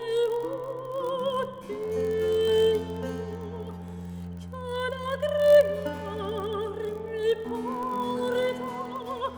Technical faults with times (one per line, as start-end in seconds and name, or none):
0.00-9.37 block size mismatch (padded)